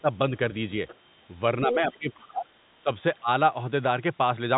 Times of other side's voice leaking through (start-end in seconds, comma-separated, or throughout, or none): 0.88-0.97, 1.92-1.97